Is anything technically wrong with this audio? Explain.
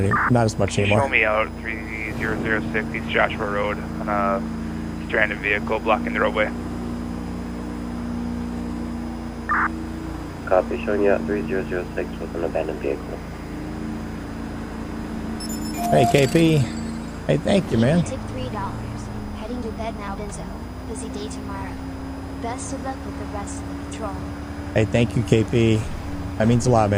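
Yes. A switching power supply is running in an audible burst mode, or beating against another supply, producing a switching supply whistle for the whole clip. Its oscillation lands inside the hearing range and leaks into the signal path as a thin, high whistle near 5 kHz, sitting roughly 35 dB below the audio. The pitch wanders between about 4.93 and 5.04 kHz as the supply's load shifts.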